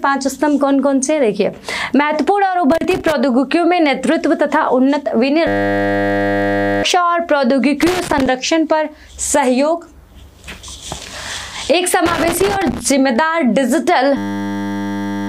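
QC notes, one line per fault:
2.72–3.12 s, 7.81–8.26 s, 12.06–12.81 s: loose connector crackle. Irregular bursts of scratchy crackle as a worn or dirty contact rapidly makes and breaks, chopping the signal on and off. Any DC offset on the line adds pops at each break.
5.47–6.83 s, 14.17 s to the end: system hang loop. The playback froze while the hardware kept replaying one 10 ms slice of its buffer, so the audio becomes a steady 100 Hz buzz. About 1.5 s and 1 s of audio are lost.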